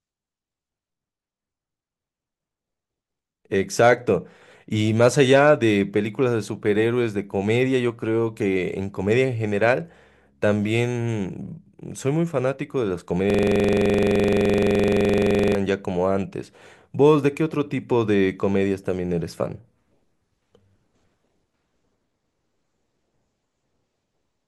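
At 13.30 s the speech freezes into a system hang loop that lasts until 15.55 s. A single 42.67 ms slice of audio repeats exactly, over and over, at about 23.4 times per second, giving a rapid mechanical stutter rather than a smooth buzz. The driver or host stopped supplying new audio while the hardware kept replaying its ring buffer, which fits a 2048-sample buffer. Unlike a dropout or glitch, nothing new arrives and the identical fragment cycles with perfect regularity.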